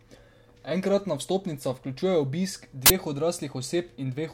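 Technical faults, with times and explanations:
2.86–2.90 s, uninitialised buffer: a block was sent to playback before any audio had been written into it, so stale memory contents were played as samples, giving a sudden, loud burst of digital noise about 43 ms long, which fits a 2048-sample buffer.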